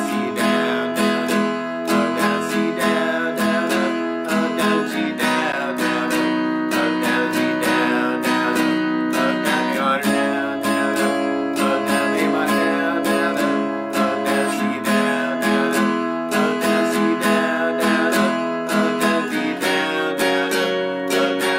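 At 5.52 s the playback chain briefly delivered zeros, a block of digital silence about 10.7 ms long, a length that fits a 512-sample buffer. The sound drops abruptly to nothing and returns without any fade, so the short hole is heard as a tick or dip.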